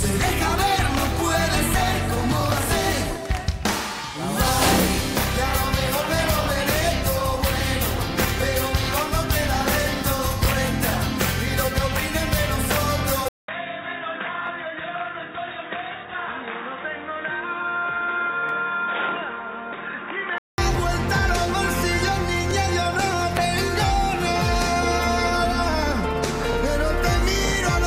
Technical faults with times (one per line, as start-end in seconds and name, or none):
13.28-20.58 input switched to a poorer device
14.47 overlapping chunks
18.49-18.51 overlapping chunks
22.51 overlapping chunks